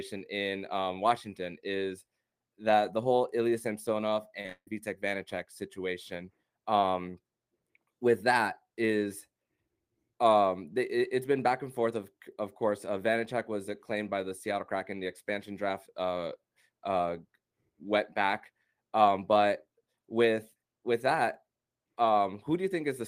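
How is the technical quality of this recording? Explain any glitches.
The recording has one clear glitch, a burst of repeated packet loss with a robotic sound from 4.41 to 4.72 s. Several holes arrive in quick succession. Each is patched by stretching the preceding sound, so about 81% of that span is synthetic fill. The longest gap is 151 ms. The result is choppy speech with pieces missing. Unlike a single dropout, the breaks cluster and repeat, giving a stuttering, machine-like texture rather than one clean silence.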